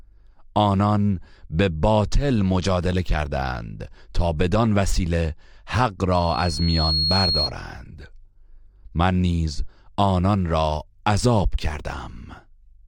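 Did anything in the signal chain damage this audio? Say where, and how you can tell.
Yes. Loudspeaker feedback squeal, analogue mic-speaker loop, 6.12 to 7.52 s: a self-reinforcing 4.3 kHz tone swells over roughly 0.7 s to about speech level, showing as a bright horizontal spectrogram line.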